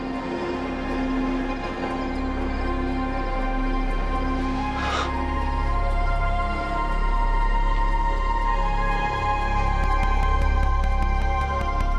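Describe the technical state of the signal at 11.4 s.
At 11.4 s you're in the later part of a train of clicks that runs from about 9.84 s to 11.82 s. It's a steady ticking, about 5.1 clicks per second at regular spacing, so roughly ten pops in all, each of much the same shape and standing out around 10 dB above the sound. A regular pulse like that is most likely interference leaking in, or a flaky connection or power supply.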